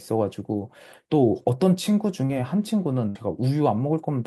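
At 2.25 s, about 40 ms of the speech failed to reach the decoder in time: a short concealed packet loss. The receiver covered roughly 37 ms of that hole by extending the sound it had just played, then cross-faded back into the real signal by 2.31 s. To the ear this is a brief smear or wobble in the speech rather than a clean gap, and whatever was spoken in that sliver is simply lost.

From 3.09 s to 3.17 s comes a burst of packet loss, with about 60 ms of audio dropped or arriving too late to play. The receiver again continued the last sound, here for roughly 59 ms, and lowered its level as the gap went on, so the speech briefly stalls into a continued, fading sound before it picks up again further along. The stretch of speech that belonged in that gap is missing.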